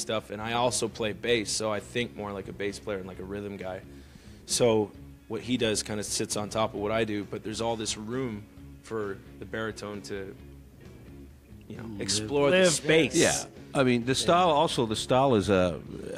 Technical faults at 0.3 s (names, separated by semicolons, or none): none